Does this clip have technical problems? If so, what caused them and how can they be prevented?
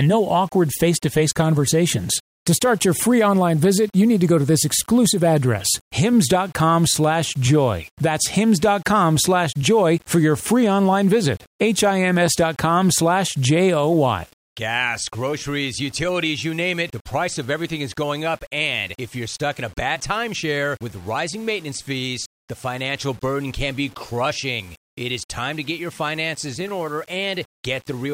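Yes. Throughout the speech, a grainy distortion rises and falls with the voice, sitting around 30 dB below it. This is likely low bit depth without dither: 7-bit rounding makes an error that follows the signal, so unlike steady hiss it vanishes in pauses and sputters on quiet tails. Prevent it by keeping 16 bits or more and adding dither before any reduction.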